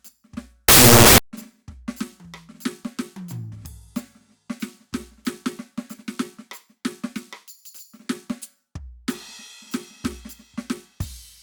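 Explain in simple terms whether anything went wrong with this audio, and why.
About two-thirds of a second into the music, from about 0.68 to 1.18 s, a burst of loud, harsh noise cuts in: samples built from the wrong bytes. The player misread how each sample's bytes fit together, so the tiny jittery details became the big values, which sounds like loud, harsh noise.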